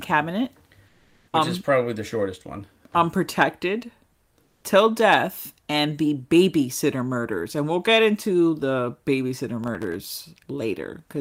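From 0.87 to 1.33 s, just before "which um is probably", the quiet background turns flat and featureless, about 3 dB lower. It happens again from 4.43 to 4.63 s, about 4 dB lower. This is comfort noise in place of the background. Discontinuous transmission likely paused the sender, and the receiver filled the gap with synthetic noise.

From 9.64 to 10.04 s, a gritty burst of processor overload crackle rides on the speech. Around ten very short buffers, each under a millisecond, missed their deadlines. Each miss replayed a scrap of old audio with hard edges.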